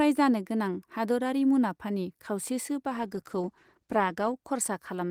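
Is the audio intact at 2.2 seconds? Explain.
Yes, the audio at 2.2 seconds is intact, with no dropout, click, distortion or other fault at that moment.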